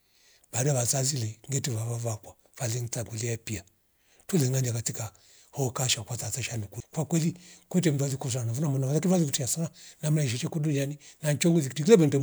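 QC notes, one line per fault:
6.80 s, CD skip: between "katika hoka shakwatata tesha" and "kwa kweli kute mzazi" the player loses its track on the disc's spiral and lands on a different turn, muting for only a few milliseconds before resuming. The brief dropout and abrupt splice produce a tick and a discontinuity in the speech. On the waveform there is a near-flat sliver with a sharp step. On the spectrogram it shows as a thin broadband vertical line with mismatched harmonics on either side.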